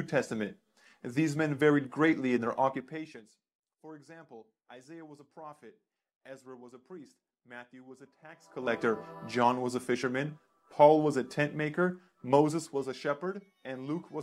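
Zipper noise runs from 12.3 to 12.98 s as the level drops by roughly 10 dB in coarse steps, around fifty a second, each leaving a small click. This fade ticks audibly while it moves.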